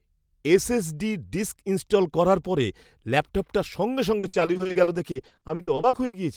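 From 4.19 s to 6.15 s, right after "করার পরে ল্যাপটপটা সঙ্গে", the speech breaks into repeated packet loss with a robotic sound. About two dozen short holes, the longest 80 ms, are each patched by stretching the preceding sound, so about 740 ms, or 38% of the stretch, is filler. On a waveform the envelope turns choppy. A spectrogram shows smeared, frozen harmonic bands broken by abrupt vertical seams.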